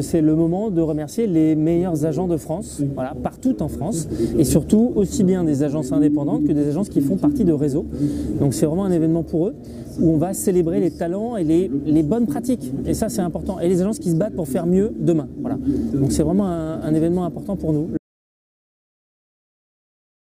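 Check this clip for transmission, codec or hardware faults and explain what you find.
One fault: an audio dropout to silence from 17.98 s to the end, likely a lost input feeding silence, so sound cuts off mid-flow into dead, tone-free silence.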